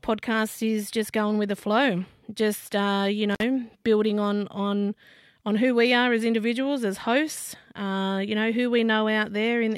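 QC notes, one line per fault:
3.31 to 3.43 s, intermittent contact: after "flow just uh you" the speech drops out for about 53 ms with crackle at both edges, a loose connection briefly opening.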